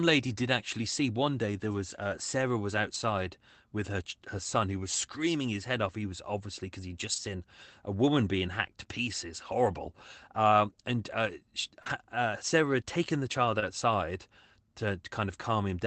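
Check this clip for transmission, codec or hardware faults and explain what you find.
Yes, there are transmission faults. Five short stretches of this speech were rebuilt from error-correction data, and two brief gaps were concealed. The call path itself is limited to about 8 kHz by the Opus codec.

Lost packet rebuilt from error correction: This occurs at 2.90–2.96 s, 7.12–7.18 s, 9.76–9.90 s (just after "being hacked to pieces"), 11.86–11.92 s (after "and uh she") and 13.62–13.64 s. Each lost packet was replaced by a low-bitrate copy carried in the next packet, so 40 ms, 80 ms or 20 ms of audio plays with no gap, but it sounds rougher and grainier. On a spectrogram these frames show blurred harmonics and a noisier, speckled texture. On a waveform they show no dropout.

Short concealed packet loss: This occurs at 11.82–11.88 s, right after "and uh she", where 36 ms was synthesised, and at 13.60–13.64 s, where 19 ms was filled. 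The packets did not reach the decoder in time, so the decoder extended the preceding sound and then blended back into the real signal. This is heard as a quick smear or wobble. On a spectrogram, where the preceding sound was voiced, the harmonics run flat and unchanging before the crossfade; where it was unvoiced, the fill shows as shaped noise. On a waveform a voiced fill appears as repeated, gently decaying cycles.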